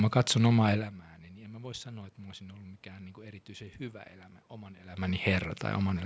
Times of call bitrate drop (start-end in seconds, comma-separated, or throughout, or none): none